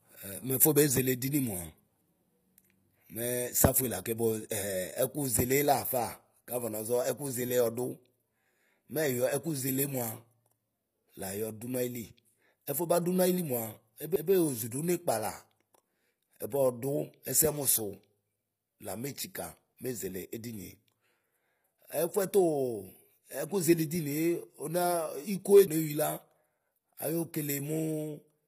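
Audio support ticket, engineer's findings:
Throughout: gritty, lispy s sounds and metallic treble, with harmonics misaligned above the crossover. Likely HE-AAC compression: band replication copies lower bands upward. Damage is plainly audible, fitting a low bitrate near 24 kbps. Spectrogram: hard ceiling at 15.5 kHz, blocky upper bands.

CD skip at 14.16 s and 25.67 s: a tick, a momentary mute of a few milliseconds, then the audio resumes from another point. The pickup laser jumped to a different turn of the disc spiral. Waveform: abrupt discontinuity. Spectrogram: thin vertical broadband line.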